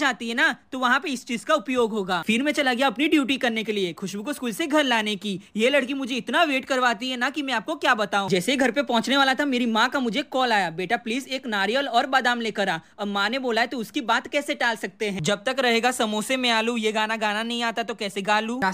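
Clock slip clicks run from 0.10 s to 18.73 s as a faint tick roughly every 40 ms, blurring into a soft rattle. The likely cause is two unsynchronised clocks about 700 ppm apart, so one sample is dropped or repeated whenever the drift adds up to a full sample.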